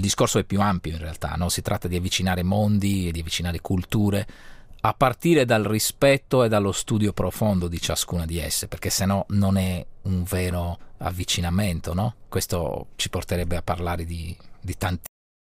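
At 15.06 s the audio has a cut-off end. The sound stops abruptly in mid-event. It does not fade or decay. It drops straight to digital silence, which lasts about 0.35 s until the file ends. The final stretch of audio was never written out or played back. The buffers holding that tail were lost before they reached the output. The result is a hard edge where the sound should have continued or trailed away naturally.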